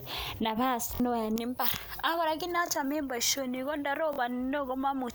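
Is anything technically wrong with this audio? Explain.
Yes, there are two problems: a repeated buffer at three points, and pre-emphasis left on for most of the clip.

The repeated buffer occurs at 0.95 to 1.00 s, 2.67 to 2.69 s and 4.13 to 4.18 s. Each time, fresh speech failed to reach the output in time, so the same roughly 23 ms chunk was played again, which fits a 1024-sample buffer. It repeats twice at the first and third points and once at the second, with a hard seam at each repeat. These sound like brief mechanical stutters, and around a twentieth of a second of speech goes missing at the first and third. Unlike a dropout, there is no silence. The gap is filled by copies of the same chunk.

Pre-emphasis left on runs from 1.36 s to the end. The treble was lifted for recording or transmission, and the matching cut was never applied afterwards. The result is about 11 dB more level at 10 kHz than at 1 kHz, a shape consistent with a J.17 curve. 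From that point on, the speech sounds thin, bright and hissy on sibilants. A plain treble EQ or a brighter microphone would be present from the start. Here the tilt switches on partway through, which points to a missing de-emphasis stage.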